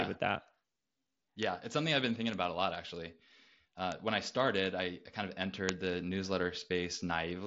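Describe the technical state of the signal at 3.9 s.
At 3.92 s, just before "when I started I", a bit error spike: a flipped bit makes two samples jump by a power of two, giving one sharp broadband tick.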